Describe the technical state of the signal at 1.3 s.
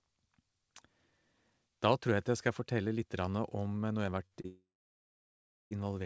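At 1.3 s the speech is intact, with no fault present, and only the G.722 call path's coding band-limits it to nothing above 8 kHz.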